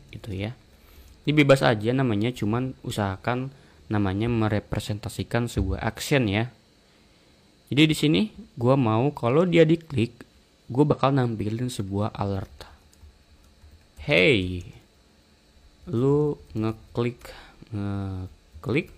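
At 10.87 s, compressed frames are skipped. Frames were missing or rejected, so the sound jumps ahead about 50 ms.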